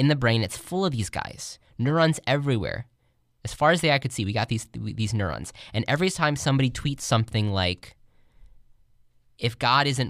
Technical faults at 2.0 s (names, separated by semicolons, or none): none